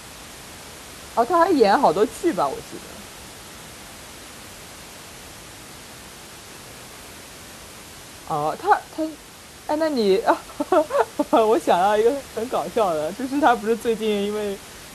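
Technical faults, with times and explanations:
Nothing here has gone wrong technically, and the only extra sound is the room's own background noise sitting about 20 dB under the speech, which is part of the recording itself.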